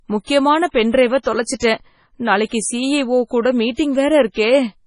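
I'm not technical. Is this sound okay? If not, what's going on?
No. Through the whole speech clip the sound is watery and swirly, with s sounds turning metallic and nothing above 10.5 kHz. That points to heavy MP3 compression as the likely cause. Plain muffling just dulls the sound evenly, but here the treble flickers on and off moment to moment.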